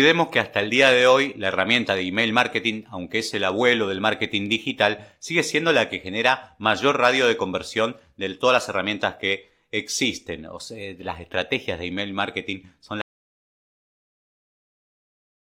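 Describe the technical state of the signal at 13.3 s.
At 13.3 s the input feeding the recording has dropped away, most likely through a disconnected device, a failed link or an unintended mute, while the recorder kept writing silence. This audio dropout to silence begins at 13.02 s and runs to the end of the clip. The speech cuts off abruptly mid-flow and gives way to dead silence with no room tone underneath, so whatever followed is lost.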